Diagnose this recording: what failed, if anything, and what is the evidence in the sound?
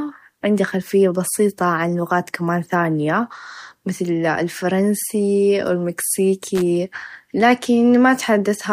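A loose connector crackle in the analogue wiring: a worn or dirty contact kept making and breaking, chopping the speech signal and adding pops wherever DC sat on the line. It is heard as a brief, irregular burst of scratchy crackle from 6.55 to 6.62 s.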